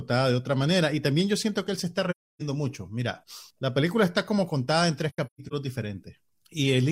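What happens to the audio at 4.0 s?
Nothing goes wrong at 4.0 s; the speech carries on cleanly through that point with no dropout, click or other break in the sound.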